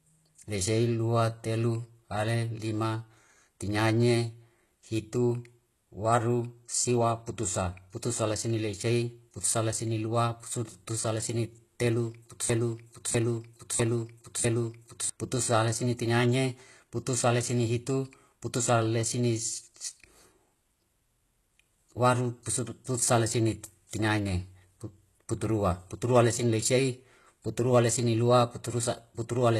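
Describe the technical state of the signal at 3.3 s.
At 3.3 s the speech carries the same codec damage heard through the whole clip, plainly audible and most likely from HE-AAC compression at a very low bitrate, on the order of 16 kbps. Only the lower spectrum is truly coded. The treble up to 12.4 kHz, with nothing above, is rebuilt by spectral band replication, copied upward from lower bands, so s sounds turn gritty or lispy. A plain low-pass or ordinary AAC would simply lose that top band instead of filling it with misaligned, metallic-sounding content.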